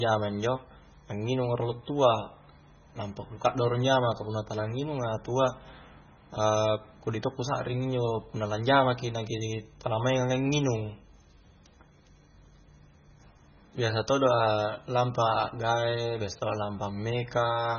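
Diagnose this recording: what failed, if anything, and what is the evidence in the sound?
The codec stage failed, most likely through MP3 compression at a starved bitrate, and the damage is heavy throughout the speech. The spectrum stops dead at 6.6 kHz, a fixed treble ceiling where the encoder abandoned the top band. Below it, weak frequency lines drop in and out from frame to frame, so the speech sounds watery and swirly, s sounds chirp metallically, and consonant attacks smear. That degree of starvation fits a bitrate of around 16 kbps.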